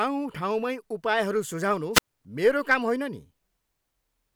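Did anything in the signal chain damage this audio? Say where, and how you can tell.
Yes: a wireless microphone squelch dropout at the radio link, 1.93 to 2.07 s, where hiss rises, the receiver mutes for about 91 ms, and speech resumes at "मेरो काम".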